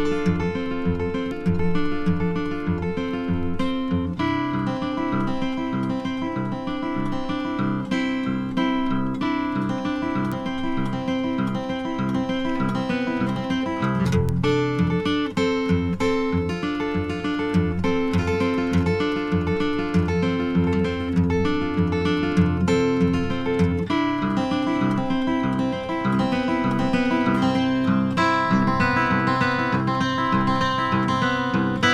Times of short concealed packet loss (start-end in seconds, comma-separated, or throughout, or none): none